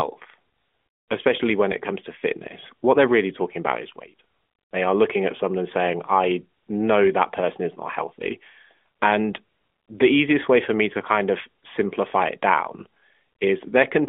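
No faults are present in the speech, which reaches the listener over a phone-line band of roughly 250 Hz to 3.5 kHz through the AMR narrowband mobile codec, whose light coding colour fits its 12.2 kbps mode.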